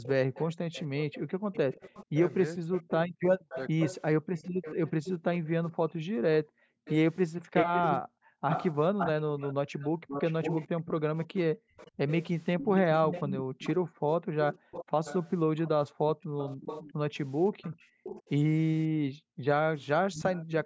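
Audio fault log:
0.03–18.29 s and 19.81–20.66 s, echo leak: a delayed copy of the speech trails the direct sound by 548 ms, roughly 10 dB down in the first stretch and 15 dB down in the second. This is likely loudspeaker pickup that the far end's echo canceller failed to remove. On a spectrogram it shows as fainter repeats of each harmonic pattern shifted about half a second later.
0.18–1.52 s, 3.05–11.77 s and 13.42–20.09 s, background gated by the echo canceller: while the loudspeaker plays, the room tone repeatedly drops away by as much as about 40 dB and then returns. The gaps total under a second in the first span and about three seconds in each of the other two. The waveform's noise floor falls to near-silence in abrupt notches, and the spectrogram shows blank patches between words.
2.58–3.81 s, speech suppressed in double talk: with both sides talking, the near speech dips sharply, by about 40 dB at worst, for a few hundred milliseconds in total. 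The likely cause is the canceller mistaking it for echo. On the waveform the envelope has bites taken out.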